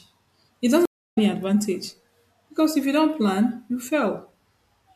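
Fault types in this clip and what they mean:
Stream reconnect: the connection drops and the player resumes with a fresh decoder. In this speech it falls silent from 0.85 to 1.18 s, about 313 ms of dead air, then picks up roughly a fifth of a second further on, so a short stretch is skipped and the first frame comes back faded in. On a waveform it shows as a flat gap followed by a ramp. A spectrogram shows a blank vertical band and an abrupt jump in content.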